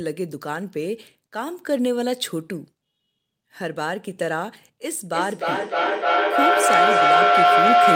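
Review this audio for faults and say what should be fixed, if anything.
Feedback howl from 5.13 s to the end: two devices in one room share the call, and each pass round the microphone–loudspeaker loop adds gain. The sound narrows to a tone near 700 Hz, pulsing roughly every 300 ms and peaking about 9 dB above the speech. To prevent it, mute one device or switch it to headphones so the loop cannot form.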